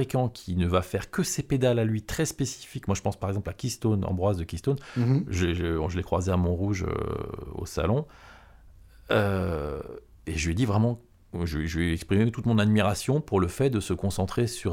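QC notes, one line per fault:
No technical faults are present in this speech recording, and the signal holds steady from beginning to end.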